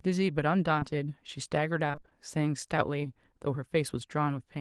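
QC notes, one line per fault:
0.79–0.83 s, short concealed packet loss: about 20 ms of speech never arrived and was patched by extending the preceding sound, leaving a brief smear before the real audio resumes.
1.87–2.13 s, repeated packet loss (robotic sound): seven short dropouts, the longest about 21 ms, each filled by continuing the last sound, so nearly half of this stretch is synthetic and sounds choppy and robotic.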